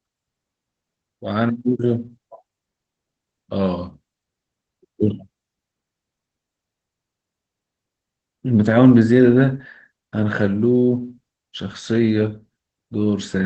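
Opus voice compression runs through the whole speech clip, with nothing above 8.5 kHz. The SILK linear-prediction coder's wideband limit cuts the top off, and its coarsely coded excitation leaves plainly audible hoarse, slightly robotic damage that points to a rate around 12 kbps.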